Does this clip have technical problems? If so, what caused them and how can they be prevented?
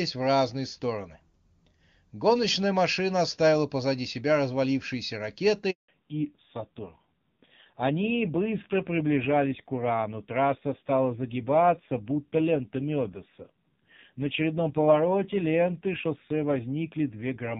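Yes. A handover gap silences the audio from 5.70 to 5.88 s, right after "оставила позади себя развалившиеся". No speech frames arrived for about 180 ms while the call switched networks. Seamless handover support, or a terminal that buffers frames across the switch, would prevent it.

From 5.88 s to the end there is a fallback to narrowband. The clean HD Voice sound before the switch gives way to a band capped at 4 kHz. The new link's codec sounds dull and rough, which fits a low-rate AMR narrowband mode. Keeping both networks provisioned for AMR-WB would prevent it.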